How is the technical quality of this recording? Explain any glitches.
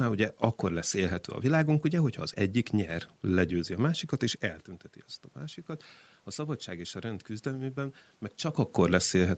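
There's one real glitch, an automatic gain rise. From 6.24 to 8.04 s, after the level reaching the mic drops by about 12 dB, the gain control slowly pushes its gain up about 3 dB, so the voice and room noise swell together. The talker's own distance shifts, around 4.5 and 8.5 s, aren't a system fault.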